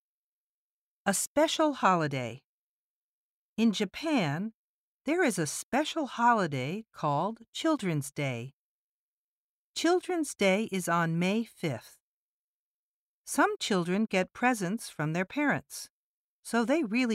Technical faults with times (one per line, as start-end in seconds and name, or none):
none